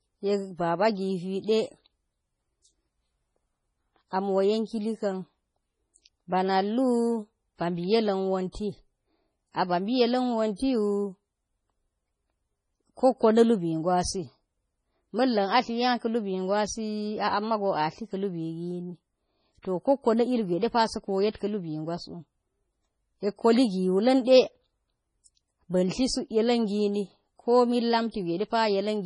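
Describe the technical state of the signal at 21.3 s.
At 21.32 s, lasting until about 21.35 s, a pre-echo precedes a sharp attack in the speech. A short hiss spreads across roughly 31 ms of otherwise quiet signal before the onset, and the attack itself sounds softened and smeared. The transform codec spreads its quantisation noise evenly across each block. Here the attack lands late in its block, so noise scaled to the loud onset fills the silent stretch ahead of it.

That block-based coding is part of heavy damage that runs through the whole clip, most likely from MP3 compression at a low bitrate, around 24 kbps. Nothing is present above 10.5 kHz, so sibilants lose their top end and sound dull. Weak spectral components drop in and out from frame to frame, producing a watery, swirling texture with metallic chirps on s sounds.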